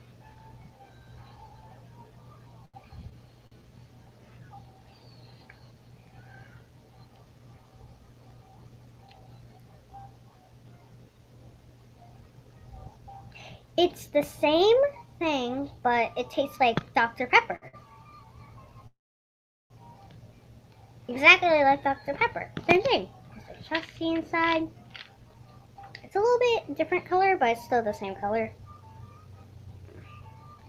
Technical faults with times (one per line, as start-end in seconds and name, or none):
2.65-3.63 repeated stalls (stutter)
9.02-9.29 jitter buffer speed-up
14.17-15.27 jitter buffer speed-up
17.56-17.76 short stall from a late packet
18.87-19.73 call audio freeze
21.45-30.59 jitter buffer speed-up